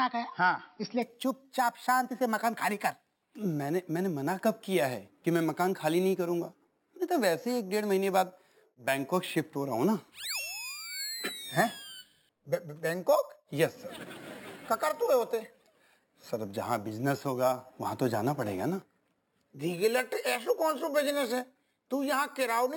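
From 1.02 s to the end, the audio carries imaging from sample-and-hold upsampling. A metallic fizz rides on top of the sound and rises and falls with its level. The fizz sits mainly between 6 kHz and 12 kHz, about 17 dB below the signal. This fits a 12 kHz source raised to 48 kHz by repeating each sample four times with no smoothing filter. The mirrored spectrum above the original band is left in place.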